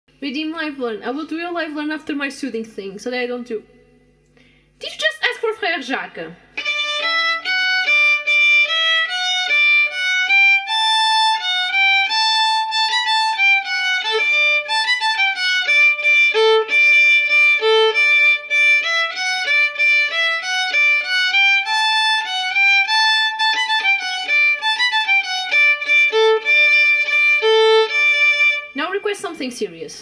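No technical faults are audible.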